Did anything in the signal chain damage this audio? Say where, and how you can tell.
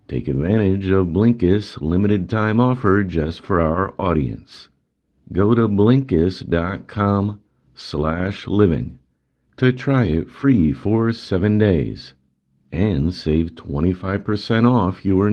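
Yes. At the network stage, about 20 ms of the call arrived too late for the decoder around 7.03 to 7.07 s. This is short concealed packet loss: the receiver extended the preceding sound to cover the hole and blended back, so the moment smears briefly.

Also at the network stage, a lost packet was rebuilt from error correction at 7.05 to 7.07 s. The Opus decoder played a 20 ms low-bitrate copy carried in the following packet, so nothing drops out, but that stretch sounds rougher and noisier than the 32 kbps call audio around it.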